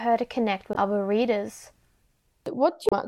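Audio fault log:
0.72–0.76 s and 2.89–2.93 s, damaged data in a compressed stream: corrupted bytes make the decoder misread frames and lose sync, producing brief glitches that break into the speech.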